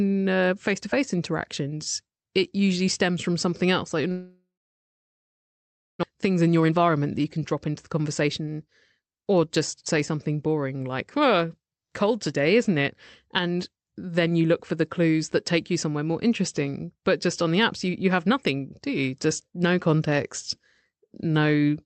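A speech recording in which packets likely stopped arriving for a long network dropout from 4.11 to 6.05 s. About 1.6 s of audio is lost: the receiver stretches the last sound into a brief fading buzz, then leaves roughly 1.5 s of near-silence before speech resumes. The late packets then arrive together, leaving the jitter buffer holding around 300 ms more than it targets, so a jitter buffer speed-up trims pitch periods repeatedly from 6.13 to 8.48 s. Speech plays about 11% faster at unchanged pitch and sounds hurried until that excess is drained. This all passes through a call codec whose coding noise and cut-off near 8 kHz fit Opus at around 40 kbps.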